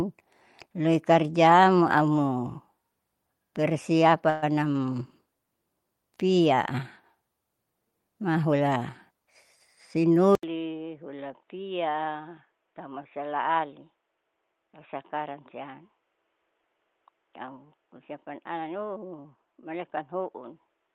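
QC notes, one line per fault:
4.29–4.44 s, call audio freeze. The sound stalls for about 130 ms and is filled with a fading continuation of the last sound. It then resumes where it stopped. Nothing is lost, but the stream falls about 130 ms further behind. Late packets likely emptied the jitter buffer.
9.97–10.19 s and 17.39–18.91 s, jitter buffer speed-up. The receiver trims short pitch-period slices repeatedly to shed excess buffered delay. The first stretch runs at 113% speed, losing roughly 40 ms. The second runs at 106%, losing roughly 100 ms. Pitch stays the same, so the sound just seems hurried.
10.35 s to end, input switched to a poorer device. An 80 ms silence marks the switch. After it, nothing passes above 3.8 kHz, so the sound turns dull. The level drops about 10 dB. A new noise floor sits about 45 dB below the signal. A change of input device is the likely cause.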